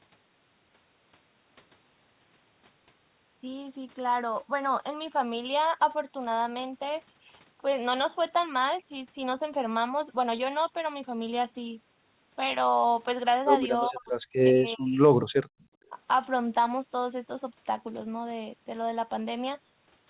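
Speech recorded over a call, with nothing heard above 4 kHz, which fits a narrowband G.711 A-law path. The talker's speech is suppressed in double talk three times. From 13.89 to 14.14 s it drops by about 35 dB. From 14.43 to 15.01 s it drops by about 30 dB. From 15.90 to 15.96 s there is a shallower dip of about 10 dB. The voice sinks in each stretch. The likely cause is an echo canceller facing both sides talking at once. It could not tell the local talker from the loudspeaker echo, so it turned everything down. Between 15.48 and 15.60 s the background is gated by the echo canceller. The room sound falls away by about 32 dB for roughly a tenth of a second. It then comes back when the canceller releases. The canceller clamped the microphone hard while the loudspeaker was active. Right after, from 15.60 to 15.64 s, a faint echo leak appears. It is a brief delayed copy of the voice, trailing by 396 ms and sitting around 40 dB below the speech. 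It is likely residue that the far side's canceller failed to remove from its loudspeaker pickup and then sent back.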